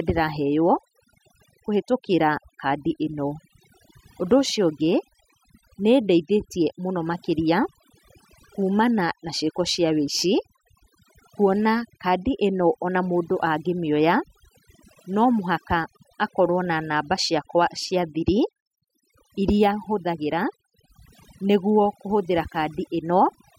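Throughout, the background drops to near-silent gaps with twinkling specks: overdone noise removal, with bands near the noise estimate pushed down or off.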